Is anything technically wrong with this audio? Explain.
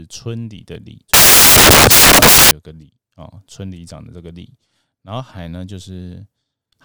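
Yes. Samples built from the wrong bytes, from 1.14 to 2.51 s: the bytes of each sample are being assembled wrongly, so the rapidly changing low-order bits end up as the most significant part. The speech turns into loud, harsh broadband noise.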